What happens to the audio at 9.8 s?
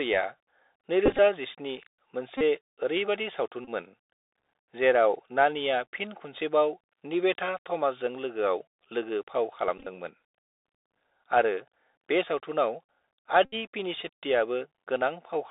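From 9.78 to 9.87 s, the Bluetooth headset packet repeated fault breaks up the sound. Lost packets were replaced by re-decoding the previous packet. About 52.5 ms goes missing, scattered over 82.5 ms. Runs up to roughly 15 ms repeat every 3.75 ms, giving brief buzzes near 267 Hz.

Underneath, the Bluetooth CVSD headset codec is plainly audible. Its one-bit up-or-down coding at 64 kbps leaves a granular hiss. The band is held to about 300 Hz to 3.7 kHz, so the sound is narrow and s sounds turn scratchy.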